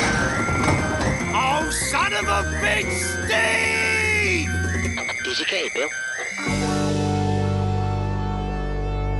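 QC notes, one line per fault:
Nothing here to flag, so this one can go through without any notes.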